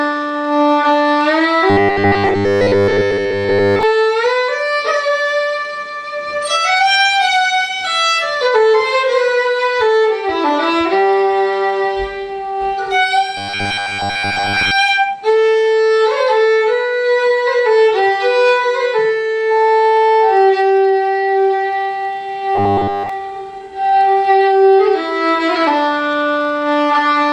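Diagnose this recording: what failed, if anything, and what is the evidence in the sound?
Robotic sound from repeated short buffers at 1.70–3.83 s, 13.37–14.71 s and 22.55–23.09 s: a rigid 100 Hz buzz replaces most of the sound, and all of it in the last stretch. It's likely a starved buffer looping 10 ms chunks.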